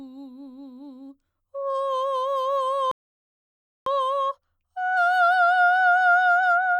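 Right at 2.91 s the music drops out into dead silence and sits there until 3.86 s, then carries on from exactly the note it left. That's a rebuffering stall: the player ran dry of downloaded audio and just waited for more to arrive. Nothing gets skipped, so the passage stays intact, but you've got roughly 0.95 s of extra time wedged into the track.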